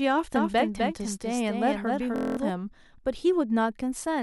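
From 0.36 s to 2.50 s, the speech is heard twice. This is a doubled audio track. A second full-band copy trails the original by roughly 300 ms. It sits about 5 dB below it. The copy carries no decay and no room colour. It cuts in and cuts out abruptly. The likely cause is a second, slower capture path feeding the same mix, or an edit holding two copies out of step.

At 2.16 s, inside that doubled stretch, a system hang loop begins. It lasts until 2.37 s. The computer or driver stalled while the sound hardware kept cycling one ring buffer. A 23.22 ms slice repeats nine times, which fits a 1024-sample buffer. At 43.1 Hz the repeats fuse into a steady buzz. Roughly a fifth of a second of real audio is lost beneath it.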